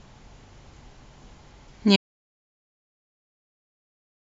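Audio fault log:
1.96 s to end, audio dropout to silence: the speech cuts off mid-flow into silence with no room tone, likely from lost input while recording continued.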